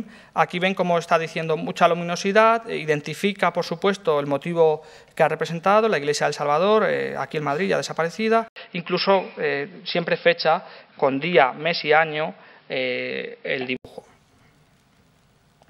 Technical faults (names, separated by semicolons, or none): input switched to a poorer device